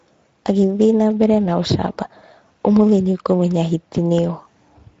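From start to end the speech sounds hoarse and grainy, with a plainly audible coarseness and nothing above about 7.7 kHz. This is Speex codec damage: the CELP coder has too few bits for the excitation, at a rate that points to roughly 16.8 kbps.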